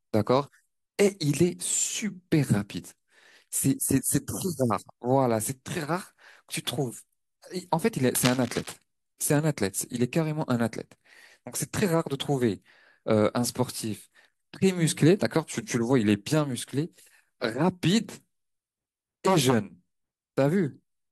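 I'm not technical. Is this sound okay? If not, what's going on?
No. From 8.15 to 8.75 s, a scratchy, rustling burst sits over the speech. This is cable scratch noise, likely from a worn cable or connector being moved.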